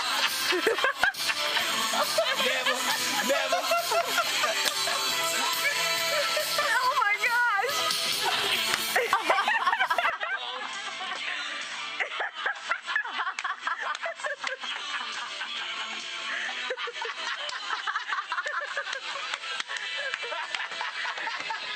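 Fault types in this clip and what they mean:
Input switched to a poorer device: from 10.10 s to the end the sound abruptly turns duller and slightly quieter, about 5 dB down, with nothing above 8.3 kHz and a faint new background noise well below the signal, likely from recording switching mid-take to a narrower-band microphone.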